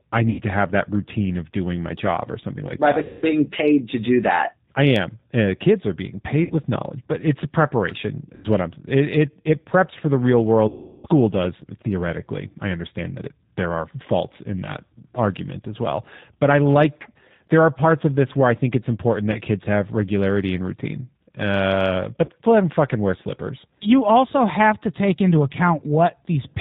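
The whole clip of speech runs through a G.729 codec, and you can hear it: everything above 4 kHz is gone, and the voice has that slightly rough, synthetic edge from being rebuilt out of a vocal tract filter, a pitch predictor and a few pulses per 10 ms frame. The damage is plainly audible. It's the low-complexity G.729A flavour at 8 kbit/s.

On top of that there's VoIP packet loss concealed by the speech codec, seven times. At 0.30 s, just before "to have that routine", about 90 ms goes missing. At 3.04 s, leading into "paid to do that", it's about 180 ms. Then 6.44 s (60 ms), 8.35 s (90 ms), and the big one at 10.68 s, about 360 ms. At 19.32 s, between "I think it's important" and "kids have regularity and", there's a 30 ms gap, and another 30 ms gap at 22.25 s. Each time the decoder keeps extending its last pitch and filter while turning the gain down, so you get a stretched, buzzy tone or coloured noise that fades out. 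The voice also comes back weak and a bit smeared for a moment, because each frame is built on the previous one. The lengths all come in 30 ms steps, which fits 30 ms packets.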